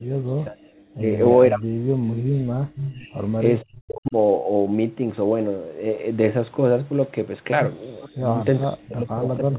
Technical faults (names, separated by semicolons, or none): speech suppressed in double talk; echo leak